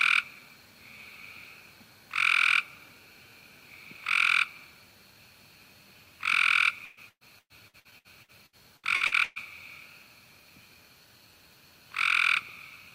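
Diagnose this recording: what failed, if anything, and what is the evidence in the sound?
Network stage, and it's repeated packet loss (robotic sound). From 6.85 s to 9.39 s the audio turns choppy, with a dozen or so holes punched in it, the longest about 120 ms. Each time a packet goes missing or shows up late, the receiver stretches the last bit of sound to cover the gap. Over that stretch just over a third of what you hear is patched-in filler, hence the choppy texture.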